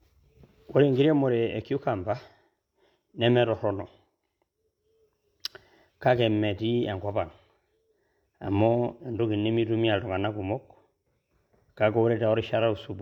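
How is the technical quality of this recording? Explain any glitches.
No audible glitches or faults.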